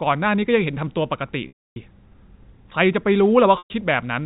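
Packet loss with pitch repetition occurs at 1.48–1.76 s (280 ms) and 3.58–3.70 s (120 ms). The receiver repeats the last pitch period, giving a brief buzzy hold that fades before speech resumes.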